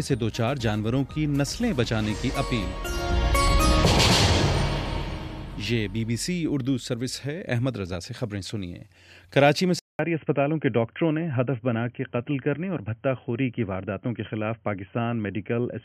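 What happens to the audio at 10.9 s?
At 10.9 s the sound is dull and boxy, with nothing above 3.2 kHz, a faint new background noise and an unchanged level. This lasts from 9.79 s to the end, after a 200 ms gap. The likely cause is an input switched to a poorer, narrower-band device.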